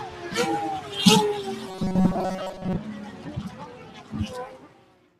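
Throughout, a speech noise suppressor is working on these sounds. Steady and fading parts sink while onsets pass, so the level pumps by around 10 dB.

From 1.69 to 2.76 s the sound turns into a rigid, metallic buzz near 188 Hz. This is robotic sound from repeated short buffers, likely caused by roughly 5 ms chunks being replayed in place of most of the real audio.

Sound is cut by the noise suppressor at 2.89 to 3.26 s, 3.79 to 4.11 s, and 4.63 s to the end. Each time, held parts and tails drop by about 4 dB.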